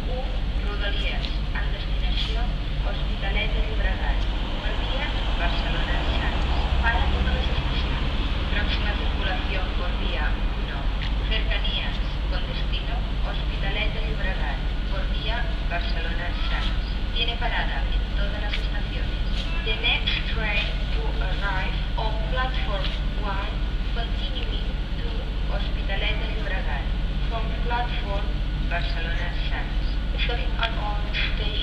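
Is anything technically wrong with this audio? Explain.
No, nothing technically wrong turns up anywhere in this audio.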